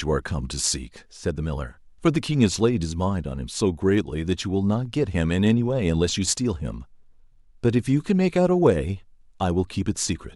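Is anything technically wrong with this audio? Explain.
No, nothing is technically wrong with this audio.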